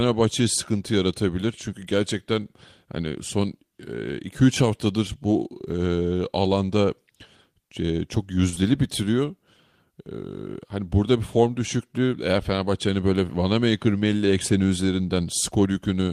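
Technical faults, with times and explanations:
8.49–8.63 s and 8.54–8.58 s, short concealed packet loss: two overlapping 20 ms gaps, patched by stretching the preceding sound, leave a brief smeared wobble.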